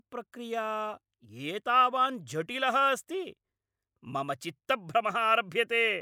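Speech recording, no technical faults audible at any point.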